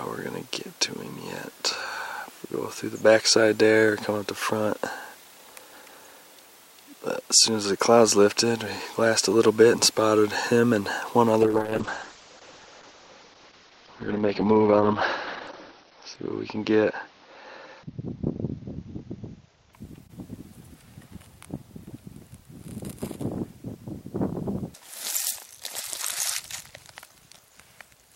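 A call bitrate drop runs from 11.43 to 20.29 s. The encoder is starved of bits, falling from what sounds like 128 kbps to near 8 kbps for 4.05 s. It also narrows the band from 20 kHz to 6 kHz, leaving the sound muffled and rough until recovery.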